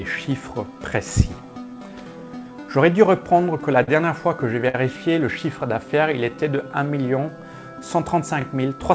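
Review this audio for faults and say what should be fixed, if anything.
Three short stutters fall at 2.19–2.22 s, 5.34–5.36 s and 8.41–8.44 s, each replaying about 23 ms of audio, so each join sounds like a quick click or doubled fragment. They arrive every 3 s, which points to overlapping chunks: the audio was handled in 3-second blocks, and each block began about 23 ms before the previous one ended. The overlap plays twice at every boundary. To prevent it, make each chunk start exactly where the last one stopped, or crossfade and trim the overlap instead of concatenating it.

At 3.83–3.89 s and 4.69–4.75 s the sound briefly hangs, stretched for about 42 ms and then 54 ms before it carries on. Nothing is lost. These are short stalls from a late packet: the jitter buffer ran dry, the receiver held the last sound until the packet arrived, and then playback resumed from the same point, adding that much delay each time. 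To prevent it, give the jitter buffer more headroom or smooth out the network timing that delivers packets late.

From 5.67 to 6.65 s the audio drags at about 95% speed while keeping its pitch. Sounds are drawn out, adding roughly 53 ms in total. This is a jitter buffer slow-down: with its reserve low, the receiver repeated single pitch periods many times to rebuild its buffer. The band limit at 8 kHz is simply the G.722 call path, which fits a 64 kbps setting. To prevent the slow-down, fix the late packet delivery so the buffer does not need to stretch audio to recover.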